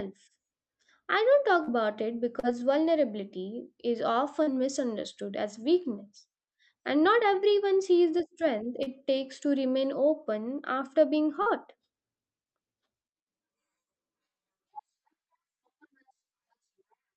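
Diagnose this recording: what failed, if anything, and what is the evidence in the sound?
The network dropped packets, and the receiver concealed the losses. Short concealed packet loss appears five times: 1.63–1.70 s, 2.39–2.46 s, 4.43–4.50 s, 8.83–8.89 s and 11.42–11.49 s. Each hole is about 40 ms. The decoder extrapolated the preceding sound, then crossfaded back, giving brief smears or wobbles. On a spectrogram each appears as a smeared patch below the 8 kHz band edge.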